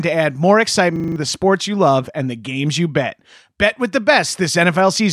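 From 0.96 to 1.16 s the speech locks into a system hang loop. A single 40 ms slice of audio repeats exactly five times, at a rate of 25 Hz. A loop that short gives a steady buzz at 25 Hz rather than a machine-gun stutter. The system stalled while the sound hardware kept replaying the same buffer, and about a fifth of a second of speech is lost. The repeats are identical copies with no fading or variation. That separates this fault from a dropout or packet-loss concealment.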